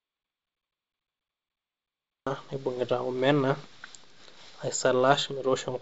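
This speech clip opens in an audio dropout to silence that is already under way when it begins and lasts until 2.26 s. The gap is silent, with no room tone at all. Speech then resumes at "naibung'ita omena". Whatever preceded it is lost. The likely cause is an input that dropped out, such as a disconnected device, a failed link or a stray mute, while recording carried on writing silence. Through G.722 wideband telephone coding, the audio stops near 7.7 kHz, and its 48 kbit/s mode leaves light added noise in the lower band.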